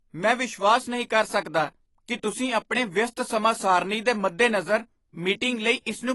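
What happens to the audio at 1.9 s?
At 1.9 s the speech carries the same damage heard from start to finish. The sound is dull and smeared. Nothing reaches above about 11.5 kHz. Sibilants turn fizzy, and sustained sounds warble. The likely cause is AAC compression, with AAC-LC coding fitting a low bitrate near 32 kbps. The encoder splits each frame into frequency lines and quantises them coarsely. It drops the top band and leaves gaps in the spectrum or fills bands with substitute noise.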